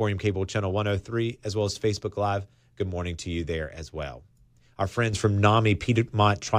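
At 5.13 s the speech and its background noise step up together by about 6 dB, a sudden gain jump that holds to the end of the clip at 6.58 s. There is no ramp: the level changes between one sample and the next, which points to a gain setting or bit shift being applied instantly in the digital path. The likely cause is such an unsmoothed gain change, heard as an abrupt loudness step.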